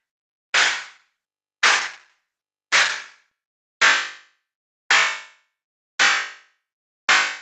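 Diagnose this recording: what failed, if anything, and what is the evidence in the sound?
A call bitrate drop, at the network and codec stage, runs from 0.58 to 3.37 s: Opus falls from 32 to 10 kbps, so the sound turns rough and watery, with a smeared, blotchy spectrogram.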